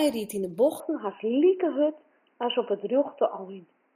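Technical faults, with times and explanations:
0.8–3.95 s, input likely switched to a poorer device: right after "ried yn 'e" the speech turns dull and boxy with nothing above 3 kHz, the level shifts by roughly 5 dB, and a faint new noise floor appears with no gap. That joint change sets it apart from a plain filter.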